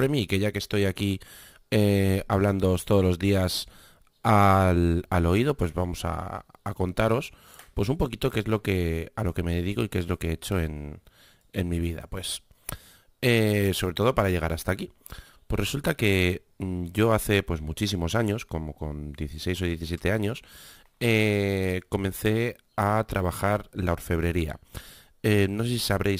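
Speech with crude rate conversion throughout: a gritty, inharmonic fizz follows louder and brighter syllables, roughly 25 dB below the voice, which fits samples simply dropped in a 48 kHz to 44.1 kHz change. Spectrograms show faint, non-harmonic lines shadowing each harmonic.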